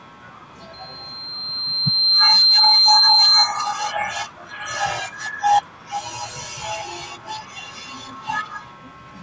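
From 0.73 s to 3.53 s a loudspeaker feedback squeal sounds over the speech. The microphone is picking up its own loudspeaker, and the loop gain exceeds one at 4.1 kHz. That tone swells over about a second and a half to about 15 dB above the speech, then ends.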